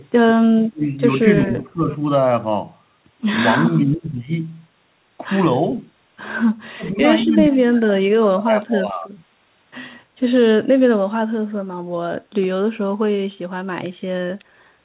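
Speech suppressed in double talk hits at 0.34–0.82 s (a dip of about 40 dB), 1.21–1.87 s (about 10 dB), 3.95–4.08 s (about 25 dB), and 6.76–7.03 s (about 20 dB). The level falls away or cuts out in pieces. The likely cause is an echo canceller that couldn't separate local speech from loudspeaker echo and attenuated both.

An echo leak appears at 7.20–7.26 s: a faint copy of the speech, about 20 dB down and 183 ms late. It likely comes from a far-end loudspeaker echo that the canceller didn't fully remove.

The longest suppression runs from 7.23 to 9.19 s, with a deepest drop of about 35 dB, over a band-limited call path with nothing above 4 kHz.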